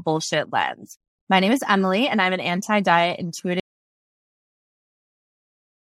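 At 3.6 s the speech cuts out into an audio dropout to silence lasting to the end, with no room tone, likely from the input being lost while recording continued.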